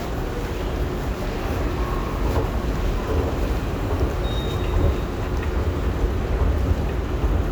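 No technical faults can be heard in this recording of sounds.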